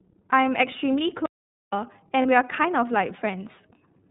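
Throughout the speech, the iLBC codec's narrowband coding removes everything above 4 kHz and leaves a slightly rough, synthetic edge. The damage is plainly audible, and the framing fits the 13.33 kbps mode with 30 ms frames. Unlike a plain low-pass filter, it adds that coarse, buzzy texture.

From 1.26 to 1.73 s there is an audio dropout to silence lasting about 470 ms. The sound cuts off mid-flow into silence with no room tone or codec fill, likely because the input was lost while silence kept being written. That dead gap sets it apart from packet-loss concealment.

From 2.22 to 2.26 s there are lost iLBC frames: one 30 ms frame is replaced by a repeated pitch cycle mixed with noise. It sounds like a brief held, buzzy vowel rather than a silent gap, and the voice is right again almost at once because each frame decodes independently.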